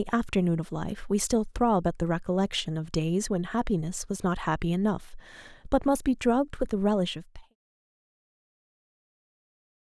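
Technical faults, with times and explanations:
Nothing stood out on listening to this speech clip.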